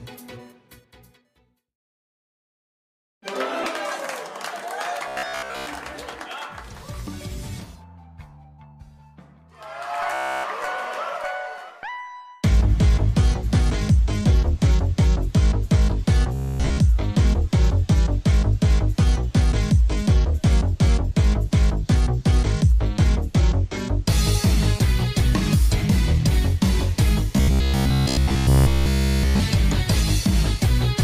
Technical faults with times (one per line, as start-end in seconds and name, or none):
3.63-3.66 corrupt frame decoded
5.08-5.67 robotic sound from repeated short buffers
10.14-10.44 robotic sound from repeated short buffers
16.34-16.78 robotic sound from repeated short buffers
27.36-29.43 robotic sound from repeated short buffers